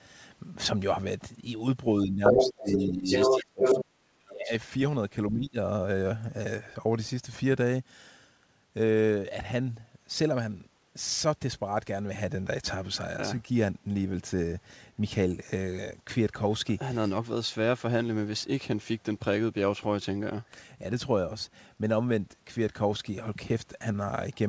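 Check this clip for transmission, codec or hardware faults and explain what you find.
Two echo-canceller faults show up in the first six seconds, both tied to the far end talking at the same moment as the local speech. The band stops at 8 kHz, which fits a wideband call codec such as G.722 at 64 kbps.

Speech suppressed in double talk, 2.03–3.1 s, 3.26–4.5 s and 5.3–5.57 s: the echo canceller, likely unable to tell the local talker from loudspeaker echo, clamped down on everything. The speech dips by about 20 dB, then about 40 dB, then about 15 dB, fading or dropping out in pieces.

Other side's voice leaking through, 2.25–2.84 s, 3.11–3.45 s and 3.61–3.83 s: residual loudspeaker echo, likely left in the microphone signal, passes into the send path. A second voice appears in short scraps, about 5 dB above the local speech, interleaved with the suppression dips.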